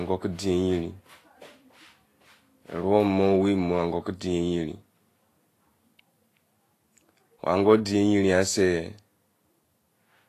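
The speech stays grainy and hissy throughout, with nothing above 14.2 kHz. Treble turned to noise rather than simply removed is likely Vorbis compression at about 33 kbps.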